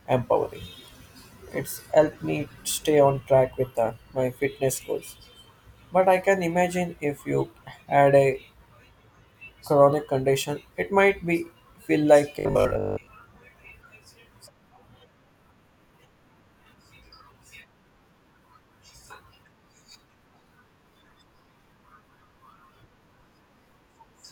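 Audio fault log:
12.39 to 13.07 s, robotic sound from repeated short buffers: for about two-thirds of a second the speech collapses into a stiff, metallic buzz pitched at 50 Hz that only loosely tracks the talking. The likely cause is audio arriving too slowly, so the playback side keeps looping its last chunk instead of waiting. A 50 Hz buzz points to a roughly 20 ms repeat, and most of that stretch seems to be filled this way rather than with real audio.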